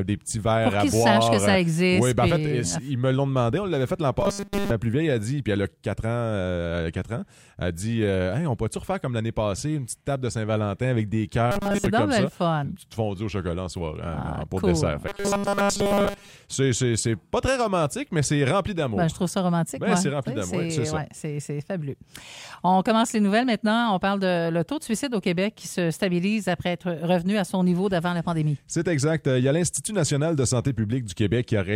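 Robotic sound from repeated short buffers occurs at 4.21 to 4.71 s, 11.52 to 11.86 s and 15.08 to 16.30 s: a rigid metallic 200 Hz buzz, likely from a 5 ms stretch being looped while most of the real audio is skipped.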